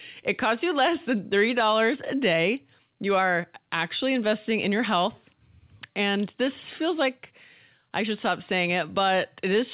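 Throughout the clip there is clock drift between sender and receiver: the sender's clock runs around 4 percent fast, so the jitter buffer keeps filling. From 0.22 to 9.55 s, repeated timing corrections trim short pieces to keep pace, giving a 104 percent playback rate with unevenly spaced edits within speech band-limited to 4 kHz, consistent with G.711 A-law.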